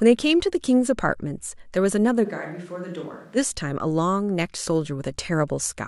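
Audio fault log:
2.26 to 3.35 s, switch to a distant microphone: speech abruptly goes roomy and hollow, roughly 10 dB down with more room noise. The close mic likely dropped out.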